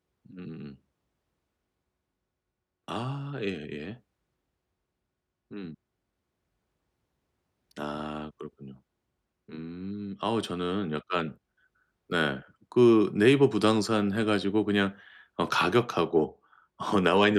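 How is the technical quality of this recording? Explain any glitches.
Nothing in the recording stands out as a technical fault, so there are no glitches to explain.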